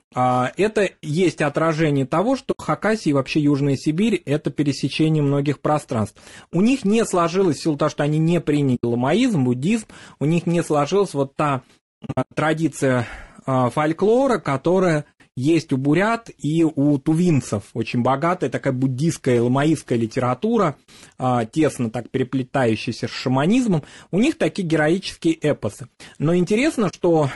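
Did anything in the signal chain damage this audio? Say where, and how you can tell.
Yes. At the codec stage, the speech has the rough, grainy texture of a low-bitrate low-delay codec, most likely low-delay AAC (AAC-ELD) at 32 kbps. At this bitrate too few bits are left for its roughly 500 frequency lines per frame, so noise fills the gaps between the pitch harmonics and the top band sounds thin and synthetic. The damage is plainly audible across the whole clip.

Further along, in network or storage, there is AAC frame loss with muting. The decoder zeroed the missing frames, and the overlapping windows faded the sound out and back in, leaving soft-edged gaps. These occur at 2.51 to 2.60 s and 8.75 to 8.84 s (80 ms each) and at 26.89 to 26.95 s (40 ms). At 12.05 to 12.38 s there is a cluster of dropouts totalling 220 ms over about 320 ms, the longest lasting around a tenth of a second.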